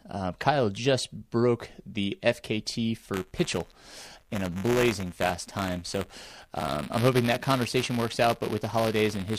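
Speech, with buffer tearing from 3.13 s to the end. A robotic buzz at 172 Hz rides on the sound whenever there is signal. That rate fits a 256-sample buffer. The writing program and the playback hardware have slipped, so they cross inside every period. A small slice of each buffer, a few percent, holds audio from the previous lap, about 10 ms old. Hard joins on both sides of that slice make the rattle.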